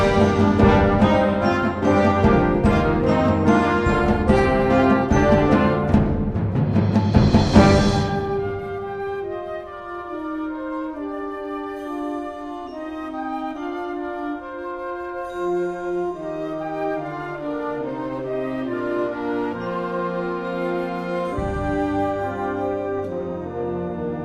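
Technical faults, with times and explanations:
Nothing technical stands out anywhere in the clip, so there's no fault to list.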